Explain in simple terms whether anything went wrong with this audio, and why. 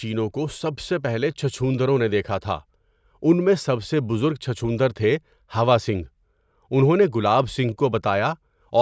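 Listening closely to this speech recording, nothing stood out as having gone wrong.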